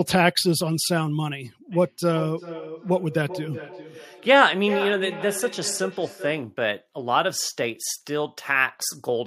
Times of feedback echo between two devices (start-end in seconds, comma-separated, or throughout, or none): 1.72-6.58